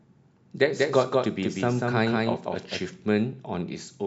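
A second capture path or misaligned edit likely mixed the audio in twice: from 0.73 to 2.79 s, a doubled audio track trails about a fifth of a second behind, equally loud, starting and stopping abruptly.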